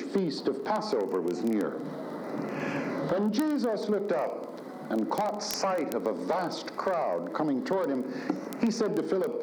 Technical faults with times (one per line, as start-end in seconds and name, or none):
0.10-9.41 word clock ticks